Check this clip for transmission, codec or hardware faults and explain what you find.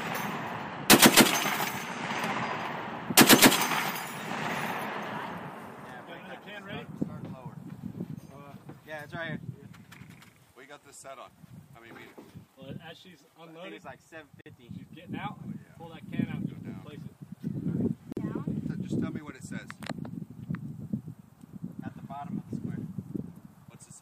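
Two gaps at a join of encoded pieces break the sound, at 14.41 s lasting 49 ms and at 18.12 s lasting 45 ms. Each piece was encoded on its own and spliced untrimmed, so the encoder's start-up silence and last-frame padding remain at the seam. The sound drops out with softened edges and then continues exactly where it stopped, with nothing lost, which separates it from a packet dropout that skips material.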